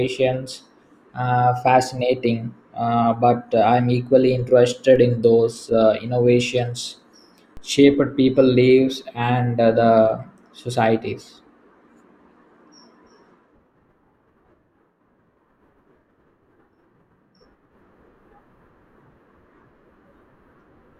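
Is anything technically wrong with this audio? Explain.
Yes, there are two DC steps. At 4.96 s, just before "in those uh innovations", and at 7.57 s, just before "shaped people lives and", the waveform's zero line jumps by about -28 dBFS and then decays away as a 5 Hz high-pass would pull it back. Each jump lands as a low thump while the speech carries on.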